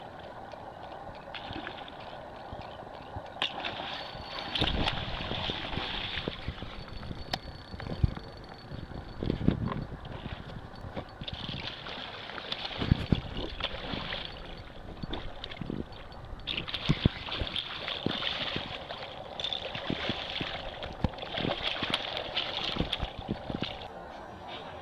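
Three brief regular ticks, the longest about a millisecond, occur between 10.55 and 11.08 s: CD scratch ticks, a scratch overwhelming error correction once per disc revolution.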